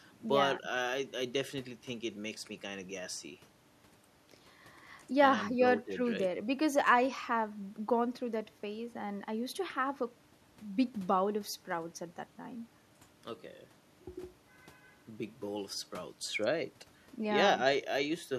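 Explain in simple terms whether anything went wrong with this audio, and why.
Nothing went wrong; this speech recording has no audible faults.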